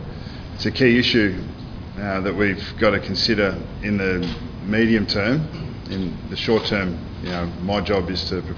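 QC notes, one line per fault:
No faults heard.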